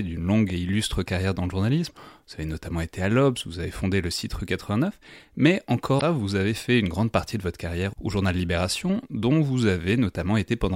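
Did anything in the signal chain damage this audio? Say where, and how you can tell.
Yes, damaged data in a compressed stream, at the codec stage. From 5.97 to 6.02 s there's a short glitch right before "vous avez fait une". Corrupted bytes made the decoder misread those frames, lose sync and hunt for the next valid header.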